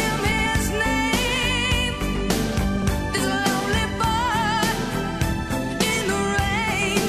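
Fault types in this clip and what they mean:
Frames out of order: neighbouring blocks of coded frames were swapped, so at 0.31–0.46 s and 2.77–2.87 s a short stretch plays with its halves exchanged. The result is a garbled flutter. Unlike a dropout or repeat, nothing is lost or doubled.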